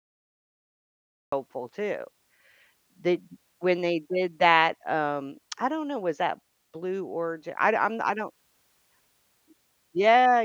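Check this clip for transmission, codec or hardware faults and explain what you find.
One fault is present, a cut-off start. The clip holds digital silence until 1.32 s, then the speech jumps in mid-sound with no natural attack or fade. Capture or streaming evidently began late, so the opening of that sound was never recorded.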